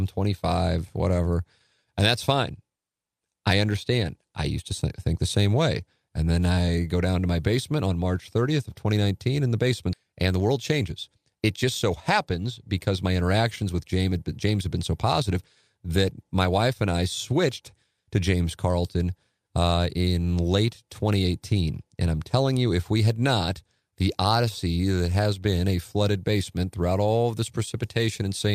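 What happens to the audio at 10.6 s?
Around 10.6 s you're inside a jitter buffer speed-up running from 10.03 to 12.45 s. The receiver's buffer had swelled, so it trimmed short pitch-period slices repeatedly, about a fifth of a second in all. The speech plays roughly 109% fast, hurried but at unchanged pitch.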